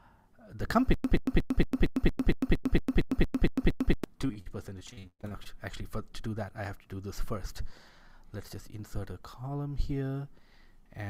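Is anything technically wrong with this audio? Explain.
Yes. From 0.94 to 4.04 s there is a stutter with silent gaps. The stream likely stalled, replaying a 128 ms fragment thirteen times, each followed by 102 ms of digital silence, so the audio in between is lost. From 4.21 to 5.47 s, repeated packet loss leaves holes up to 117 ms long. About a third of that span is patched by extending the previous sound, which makes it choppy and robotic.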